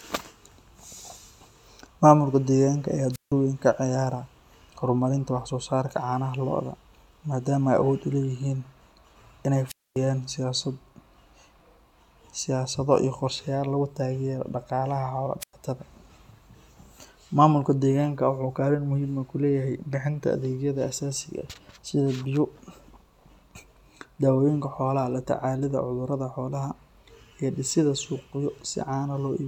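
At 3.12, 9.67 and 15.40 s the speech breaks up with a wireless microphone squelch dropout, three times. Each time the FM signal weakens, a short burst of hiss rises, and the receiver's squelch gates the output to near silence for about 160, 250 and 100 ms before the speech returns. A spectrogram shows each as broadband noise smearing across the frequencies, then a blank vertical gap. The waveform flattens almost to zero.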